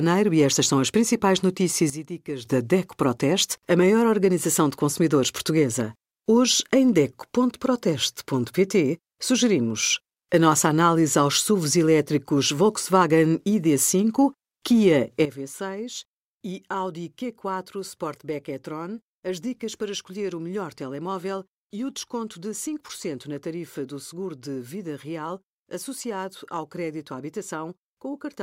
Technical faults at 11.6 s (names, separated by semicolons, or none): none